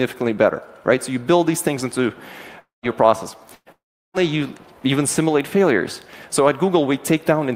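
From 2.59 to 2.86 s the sound breaks off into a fading buzz or hiss and then about 150 ms of silence, likely a long network dropout in which roughly 240 ms of audio never arrived. On a spectrogram the last spectrum smears flat and dies into an empty band.

A burst of packet loss follows at 3.55 to 3.69 s. About 120 ms went missing, and the receiver stretched the preceding sound into a decaying buzz or hiss before a short gap of about 40 ms. In the waveform this shows as a shrinking envelope with a brief flat line.

Almost immediately, from 3.72 to 4.17 s, a second likely long network dropout removes about 420 ms. A brief fading tail gives way to about 350 ms of silence, which appears as a wide blank column on the spectrogram. The audio then resumes abruptly further on.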